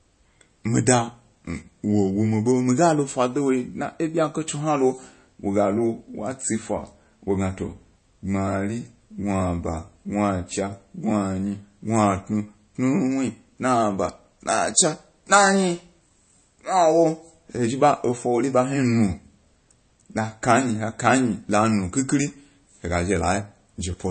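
Throughout the speech, the top end stops dead at about 8.3 kHz, and the dull, smeared quality of a heavily squeezed encoding never lifts. This is likely low-bitrate audio saved at a high bitrate: a very low-rate MP3, around 32 kbit/s, re-encoded near 256 kbit/s, which cannot restore what was discarded.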